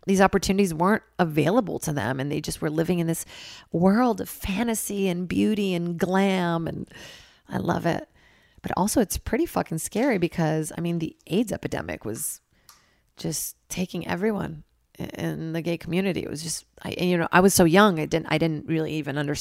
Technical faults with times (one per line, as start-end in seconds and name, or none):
none